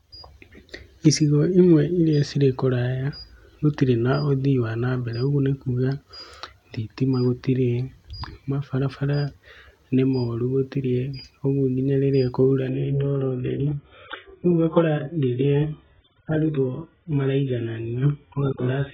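At 12.69 s, right after "rĩrĩa kwaura", the speech switches abruptly, with no gap, to an adaptive stream at a lower bitrate until the end. Nothing remains above 3.8 kHz and the audio turns muffled and smeared, which fits AAC falling from about 96 to 8 kbit/s.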